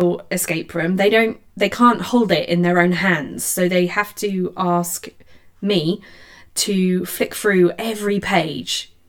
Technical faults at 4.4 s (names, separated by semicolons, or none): channel delay (comb filtering)